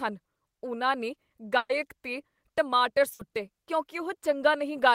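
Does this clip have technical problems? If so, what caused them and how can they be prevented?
Yes, two bursts of packet loss interrupt the speech. The first, from 1.57 to 1.72 s after "ਉਨ੍ਹਾਂ ਨੇ", lost about 120 ms of audio. The receiver extended the last sound for about 120 ms, fading it out, then went silent for 40 ms before resuming at "'ਤੇ ਟਮਾਟਰ". The second, from 3.13 to 3.22 s after "'ਤੇ ਟਮਾਟਰ", lost about 60 ms, all of it filled by concealment. On a spectrogram each burst shows as the last sound smeared out and fading, with the first followed by a blank strip. Larger jitter buffers and forward error correction would help recover lost packets.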